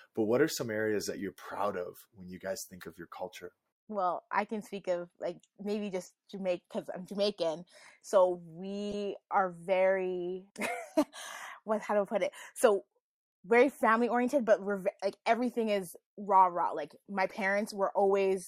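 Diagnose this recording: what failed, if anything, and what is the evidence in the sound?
The fault is in the codec stage: a corrupt frame decoded three times, as brief chirp-like blips at 6.29–6.34 s (between "of like maybe just" and "because I'm"), 8.90–8.94 s (before "are very"), and 17.27–17.32 s. The damaged bits put energy at wrong frequencies across two or three frames. The second blip is the loudest. Unlike concealed packet loss, which smears or repeats existing sound, these add new, foreign tones.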